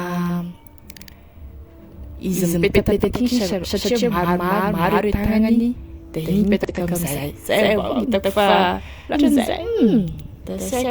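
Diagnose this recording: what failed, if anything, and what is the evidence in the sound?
The speech is heard twice throughout, a full-band copy at about the same level trailing by roughly a tenth of a second, with no reverberant decay. A waveform shows each onset repeated at that fixed offset. The doubled audio track is likely from a second, slower capture path mixed with the first.

Damaged data in a compressed stream breaks through at 6.64–6.70 s and 9.11–9.16 s as short glitches. A spectrogram shows brief disruptions there. Corrupt frames made the decoder lose sync and hunt for the next header.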